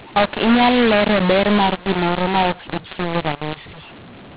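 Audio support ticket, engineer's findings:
mu-law and A-law mixed up, whole clip. A-law telephone speech decoded as mu-law. Levels scrambled, quiet parts lifted into noise. Harsh, distorted, band-limited below 4 kHz.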